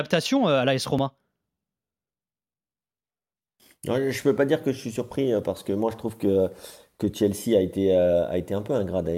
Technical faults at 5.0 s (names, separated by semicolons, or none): audio missing between chunks